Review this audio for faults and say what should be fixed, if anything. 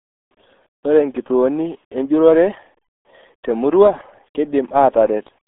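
RealAudio 14.4 codec damage runs through the whole clip: the speech is confined to roughly 200 Hz to 3.5 kHz, with nothing above 3.7 kHz, and sounds heavily muffled and gargly, which fits an 8 kbit/s dial-up-era coder discarding detail. Re-source or re-encode from an uncompressed original with a modern wideband codec at an adequate bitrate.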